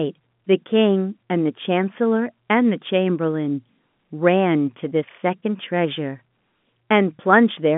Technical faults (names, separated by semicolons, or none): none